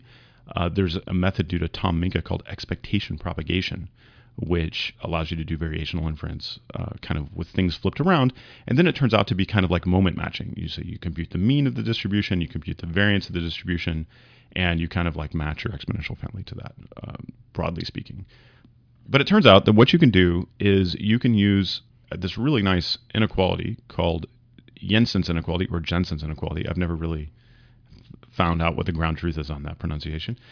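No technical faults can be heard anywhere in the speech recording; the signal stays intact and continuous throughout.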